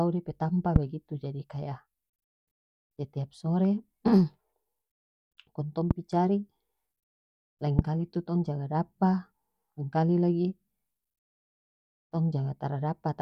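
A loud pop hits at 0.76 to 0.78 s, 5.91 to 5.93 s, and 7.79 to 7.81 s. Each is a single sharp thump, about 15 to 20 dB above the speech. The speech continues underneath. A sudden voltage pulse is the likely cause.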